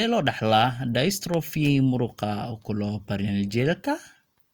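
At 1.34 to 1.36 s a single loud pop, about 10 dB above the speech, cuts sharply across the sound while the talking carries on beneath it. It is likely a sudden voltage pulse that entered the signal chain and was shaped by the circuits after it.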